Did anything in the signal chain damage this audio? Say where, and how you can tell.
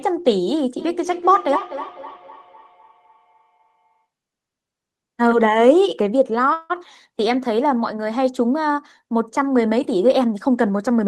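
Yes. From 0.79 to 4.06 s there is feedback echo between two devices, a call-processing fault. Each sound returns at a fixed interval of about a third of a second, peaking about 13 dB below the speech. Room reverberation would smear continuously rather than repeating discretely like this.

From 6.53 to 6.72 s a call audio freeze holds the last sound as a fading buzz or hiss for 163 ms, with no silence. The speech then resumes exactly where it stopped, 163 ms late, with nothing missing. This distinguishes it from a dropout. The likely cause is a network delay that emptied the jitter buffer.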